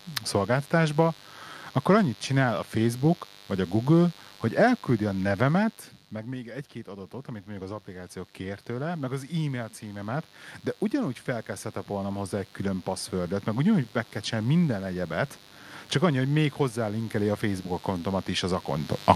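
Interference from a rectifier, dimmer or poorly shielded cable runs through this speech recording, adding mains buzz built on 50 Hz harmonics that extend into the kilohertz range. The result is a steady, raspy buzz about 25 dB below the speech, present from start to finish. Automatic gain rising occurs twice. After "hogy elküldi a nevemet", the input level falls by about 15 dB as the talker moves back around 5.5 s. The gain control responds by raising its gain about 9 dB between 6.1 and 10.34 s, so the voice and the room background swell together slowly. A second, smaller rise of about 3 dB from 10.97 to 13.53 s, just before "ugyanúgy meg kell csinálni", lifts the background noise again.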